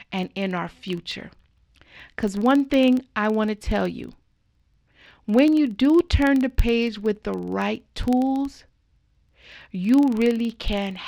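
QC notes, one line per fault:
Throughout: filter restarted on every block, a 21.5 Hz tick-buzz that rises and falls with the speech level, unlike steady mains hum, fitting a 2048-sample block where filter state resets.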